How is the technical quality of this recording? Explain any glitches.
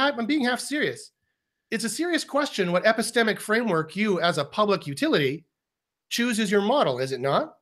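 The recording's signal holds together without any audible technical glitches.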